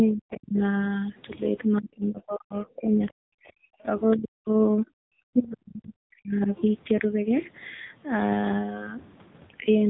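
The whole clip runs through the AMR narrowband mobile codec at 7.95 kbps, so nothing above 3.8 kHz survives. The speech sounds boxed-in and plainly buzzy, the synthetic edge you get when a low-bitrate vocal-tract model rebuilds the voice.

From 0.06 to 0.61 s, 1.8 to 3.02 s, 3.26 to 3.58 s, 4.15 to 4.53 s and 5.29 to 6.51 s the talker drops out hard, by around 30 to 40 dB. That's speech suppressed in double talk: the echo canceller likely heard both sides at once and ducked everything.

Around 3.07 to 3.12 s and 4.11 to 4.17 s there are brief faint scraps, roughly 20 to 30 dB under the speech, from the other side's voice leaking through. It's likely residual loudspeaker echo the canceller didn't fully scrub from the mic.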